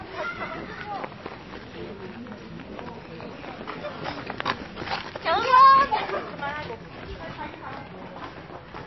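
An everyday-sound recording that is dull and watery throughout, with nothing above 5.8 kHz and a swirly, shifting texture as weak frequency detail flickers in and out. The likely cause is MP3 compression at a very low bitrate, around 24 kbps.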